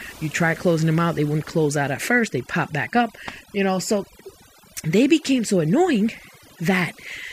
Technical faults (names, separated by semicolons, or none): overdone noise removal